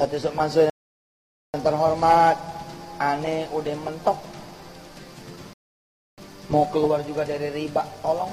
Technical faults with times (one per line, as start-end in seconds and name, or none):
0.70-1.54 rebuffering stall
5.53-6.18 rebuffering stall